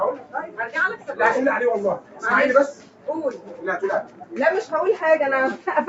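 A speech-tuned noise suppressor was left running on this non-speech audio, a noise suppressor applied to music or sounds. It treats steady, sustained parts as noise and pushes them down by roughly 10 dB, so throughout the clip the level pumps and thins while sharper onsets survive.

The clearest cases of sound cut by the noise suppressor fall at 0.16–0.59 s, 0.97–1.13 s, 1.98–2.24 s, 2.72–3.08 s, 3.33–3.64 s and 4.03–4.34 s. In each, the held or decaying sound sinks by about 9 to 11 dB, with tails clipped short over roughly 150 to 400 milliseconds. The call codec limits the top end to 8 kHz.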